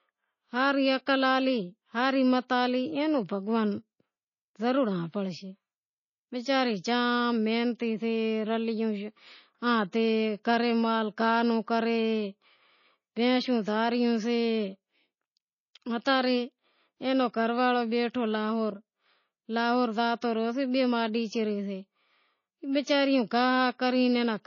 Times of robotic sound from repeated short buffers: none

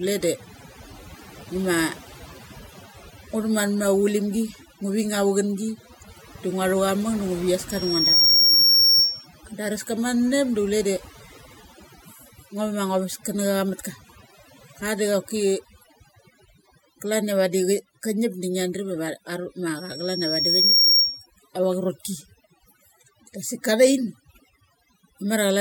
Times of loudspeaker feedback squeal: 7.69-9.27, 19.76-21.26

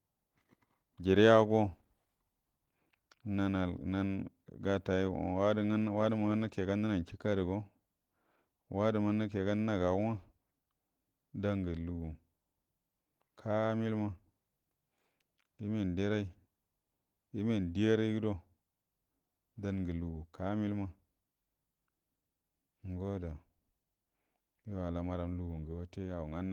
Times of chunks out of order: none

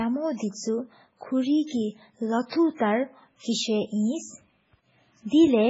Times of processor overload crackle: none

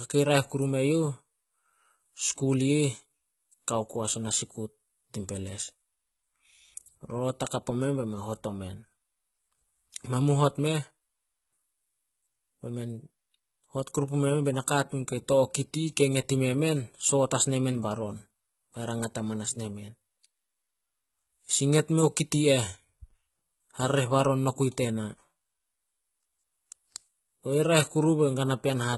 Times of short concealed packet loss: none

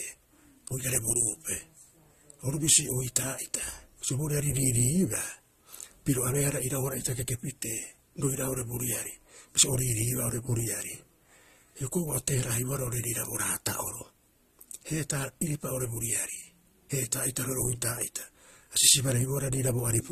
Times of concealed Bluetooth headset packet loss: none

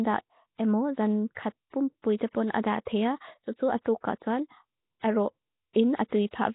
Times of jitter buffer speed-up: none

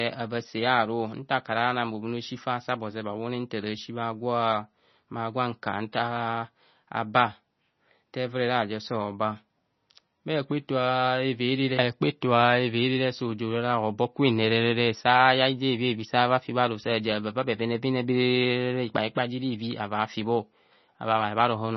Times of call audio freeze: none

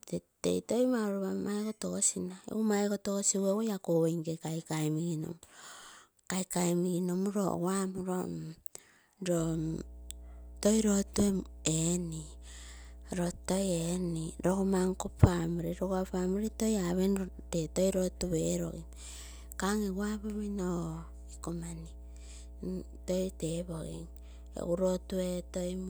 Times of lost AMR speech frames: none

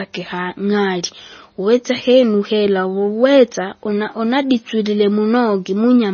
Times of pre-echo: none

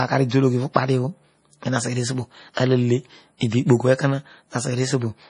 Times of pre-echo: 0.73-0.76, 2.54-2.57

